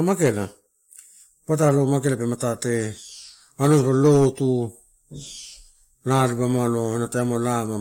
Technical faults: none

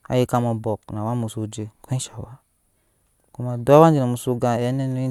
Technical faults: none

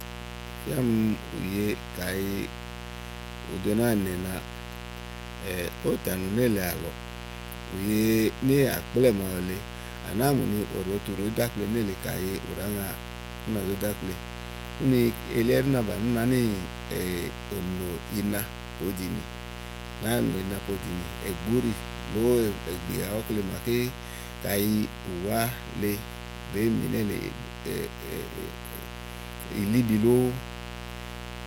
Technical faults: mains buzz

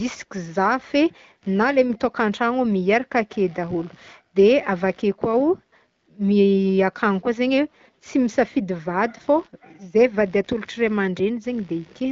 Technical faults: computer activity noise

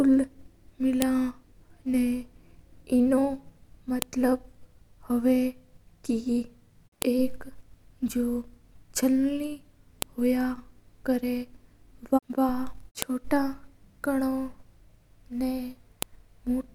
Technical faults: file header played as audio

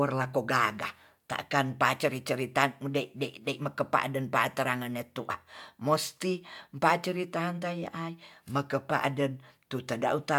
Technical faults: none

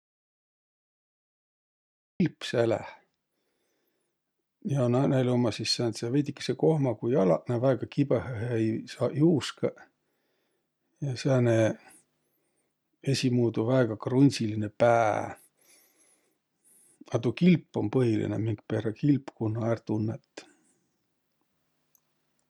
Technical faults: audio dropout to silence

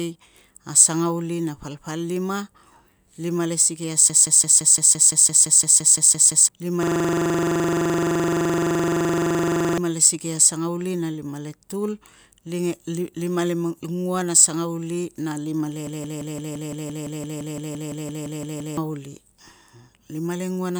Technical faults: system hang loop

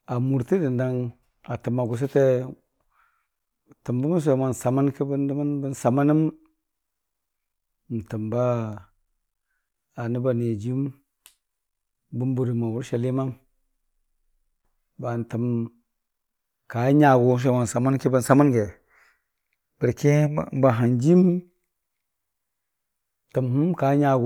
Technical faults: none

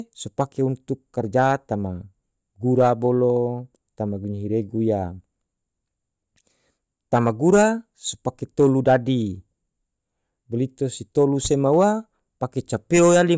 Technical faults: none

